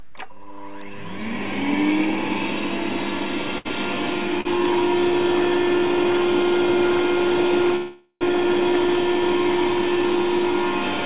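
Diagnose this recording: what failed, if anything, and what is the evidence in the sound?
Two short stalls from late packets, at the network and jitter-buffer stage, fall at 3.58 to 3.67 s (69 ms) and 4.41 to 4.47 s (42 ms). The sound that was playing is held unnaturally long with a slight buzz or dip, then picks up exactly where it left off, so nothing is lost and everything after is pushed later. On a spectrogram each stall shows as a smeared horizontal stretch of the preceding frame. The waveform shows the same short cycle repeated until fresh audio returns.

A call audio freeze runs from 7.76 to 8.23 s, about 0.45 s. The last sound is extended as a buzz or hiss that fades away, reaching roughly 30 ms of true silence before the audio resumes from the same point, with nothing skipped. The likely cause is packets held up in the network until the jitter buffer ran dry. On the spectrogram the energy decays into a narrow blank column, all under the 4 kHz ceiling of the narrowband G.711 path. 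The waveform tapers to flat and then restarts.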